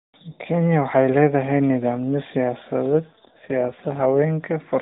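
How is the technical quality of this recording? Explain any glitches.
The recording carries one glitch, heard over narrowband mobile coding that removes everything above 4 kHz and adds light roughness, consistent with AMR-NB at 12.2 kbps.

AMR rate drop, 2.95 to 4.19 s: the codec falls to a lower rate, which fits 5.9 kbps, so the speech turns buzzier and more synthetic without any gap.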